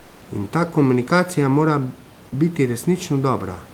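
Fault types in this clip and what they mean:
Comfort noise in place of the background: for the first 0.21 s, the real room noise is swapped for a steady, featureless hiss about 2 dB quieter. This is likely Opus discontinuous transmission, where the sender stops during pauses and the receiver synthesises roughly matching noise. On a spectrogram this stretch is a smooth, uniform wash lacking the fine texture of the room noise that follows. On the waveform it is an even, flat band at a slightly lower level.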